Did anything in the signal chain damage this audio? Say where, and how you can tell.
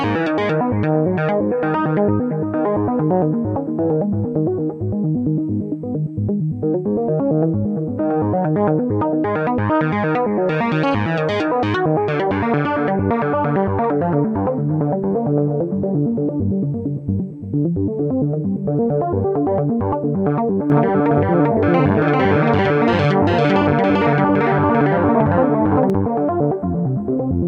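Yes. A doubled audio track runs from 20.70 to 25.90 s. A second full-band copy trails the sound by roughly 400 ms at about the same level. It has no decay and starts and stops abruptly. The likely cause is a slower second capture path or a misaligned edit.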